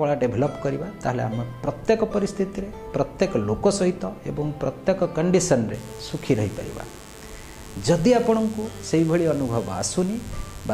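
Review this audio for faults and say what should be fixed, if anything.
A steady, raspy mains buzz starts at 5.74 s and continues to the end, sitting roughly 20 dB below the wanted sound. It is built on 50 Hz mains. A dimmer, rectifier or unshielded cable lets sharp switching spikes into the signal path twice per cycle, so the interference pulses at 100 Hz and spreads harmonics up to several kHz, which gives it that harsh edge. To prevent it, use shielded, balanced cabling and keep dimmers and switching supplies away from the audio chain.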